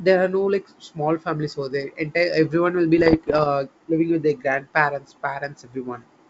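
From 2.98 to 3.46 s, the speech breaks into pops and rough bursts with brief jumps in level. These are bit errors on an ADPCM link, at a rate below one percent. Each flipped bit upsets the decoder's step size and predictor, so the damage rings on for milliseconds. The surrounding G.722 wideband coding sounds clear up to about 7 kHz, which fits the full 64 kbit/s mode.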